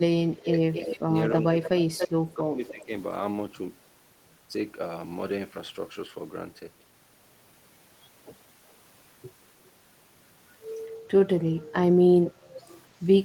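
From 0.18 to 0.52 s, 0.83 to 1.13 s and 1.33 to 2.91 s the speech ducks by up to about 25 dB and then about 15 dB, likely speech suppressed in double talk. The waveform envelope visibly sags. Overlapping these, at 0.73 to 0.96 s, 1.65 to 1.69 s and 1.98 to 2.09 s, a copy about 5 to 15 dB below the speech trails about 280 ms behind, likely echo leak. It returns quietly from 12.32 to 12.78 s at about 330 ms, appearing on the spectrogram as weak, delayed duplicate harmonic patterns.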